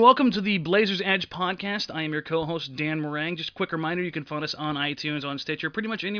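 No technical faults are audible anywhere in the recording.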